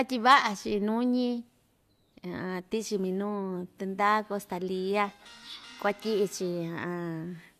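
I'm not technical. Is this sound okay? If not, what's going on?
Yes, this speech recording sounds fine, with no technical faults to be heard anywhere in it. There is nothing here that needs fixing.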